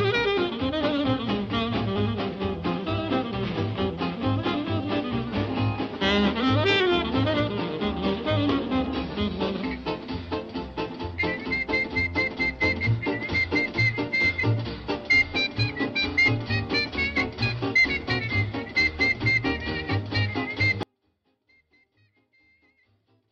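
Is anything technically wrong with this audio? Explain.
Yes. From 20.83 s to the end there is an audio dropout to a faint residue: the signal abruptly collapses to a faint leak about 40 dB down, likely from a broken feed with the path still live. The waveform shrinks to a thin band and the spectrogram goes nearly blank.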